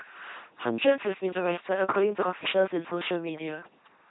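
The speech ran through an LPC-10 vocoder, which fits a 2.4 kbit/s rate. It leaves a buzzing robotic voice with stray hiss and no content above 3.9 kHz throughout.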